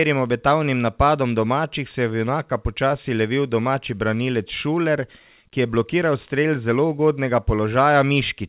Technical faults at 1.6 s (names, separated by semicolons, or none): none